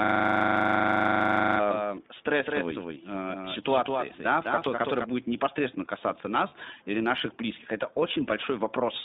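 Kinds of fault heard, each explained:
iLBC codec: A narrowband VoIP coding runs through the whole speech clip, passing only about 200 Hz to 3.7 kHz in 20 ms frames, which fits a 15.2 kbps mode. The damage is plainly audible as rough, synthetic texture. A spectrogram shows a hard ceiling near 3.7 kHz.
system hang loop: From the very start until 1.59 s, one 40 ms slice of audio repeats exactly, already looping when the clip begins. It cycles at 25 Hz and is heard as a rapid machine-gun stutter. The waveform shows identical 40 ms blocks tiled dozens of times.
doubled audio track: Between 1.71 s and 5.05 s, just before "будет непосредственно касаться", a second full-band copy of the speech trails roughly a fifth of a second behind at about 5 dB lower, likely from a second capture path. It has no reverberant tail. A spectrogram shows every feature ghosted and shifted right.
lost iLBC frames: At 6.48 s, after "будет непосредственно касаться" and before "или наших близких это", 40 ms of audio is missing. 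The decoder fills the gap by repeating the last pitch cycle with noise, heard as a brief buzzy held vowel. A spectrogram shows smeared, static harmonics there, and the speech recovers immediately afterwards.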